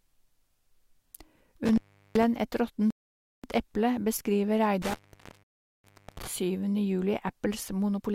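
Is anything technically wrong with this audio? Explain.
Yes. The speech has two kinds of fault.

Intermittent contact occurs at 1.66–2.26 s, open for 0.38 s, and at 4.82–6.27 s, open for 0.83 s. A loose cable or plug breaks the signal path briefly, so the speech drops out with crackle at each edge and faint hiss while the connection is open.

A rebuffering stall occurs at 2.90–3.44 s, adding 0.53 s, and at 5.43–5.84 s, adding 0.41 s, inside the second contact fault. The player exhausted its downloaded audio and paused until more arrived. The result is silence, after which the speech resumes exactly where it stopped. Nothing is lost, but the timeline is stretched.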